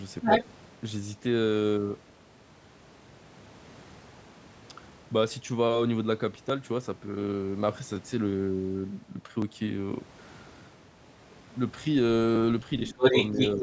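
A speech recording carrying three call-path faults. The other side's voice leaking through appears at 0.22 to 0.44 s and again from 12.87 s to the end, a second voice only about 5 dB from the talker's level, likely residual loudspeaker echo the canceller missed, showing as overlapping harmonic stripes on a spectrogram. From 0.63 to 12.36 s, clicks recur every 1.47 s, around ten of them, likely clock drift buffer slips where a small block of samples, on the order of 50, is dropped or repeated; each shows as a sharp waveform discontinuity and a thin full-height vertical line in the spectrogram. Speech suppressed in double talk hits at 12.92 to 13.01 s, a drop of roughly 25 dB, and more mildly at 13.55 to 13.62 s, about 5 dB, likely the canceller ducking the talker while both sides overlap, visible as a brief notch in the waveform envelope and a faded band in the spectrogram, within a spectrum that stops at 8 kHz.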